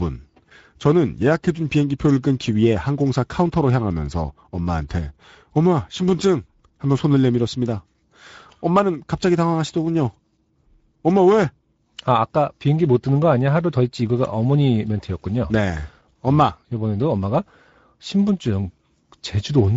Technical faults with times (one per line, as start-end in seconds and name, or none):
0.00-19.77 Speex codec